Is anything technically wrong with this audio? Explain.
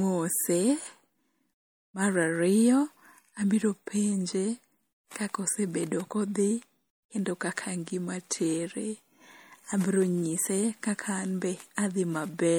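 Yes. Throughout the speech there is audible MP3 compression, likely from a low-bitrate encode, consistent with about 64 kbps. Starved of bits, the encoder drops high frequencies and zeroes weak spectral lines that flicker between frames, giving a watery, swirly texture, metallic chirps on s sounds and smeared consonant attacks.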